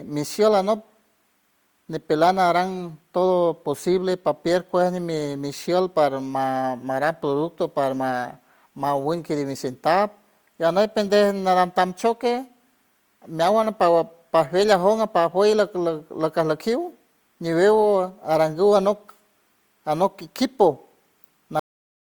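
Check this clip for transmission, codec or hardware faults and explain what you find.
One fault shows up, a cut-off end. At 21.6 s the speech stops mid-sound and the final half second is digital silence. The last buffers never reached the output, so nothing decays. Unlike a dropout, the sound never returns; unlike a fade-out, it doesn't taper.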